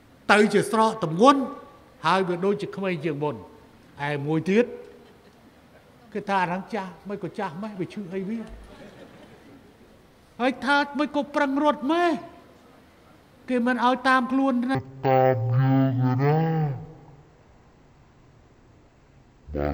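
Stereo read as mono, from 14.75 s to the end. Here the left and right samples, which alternate in the stream, are taken one after the other as if they were consecutive samples of a single channel. Each moment of sound is stretched over twice as many samples, so the audio plays at half speed and drops a full octave, 12 semitones. A fainter mirrored copy of the sound also appears in the upper half of the spectrum.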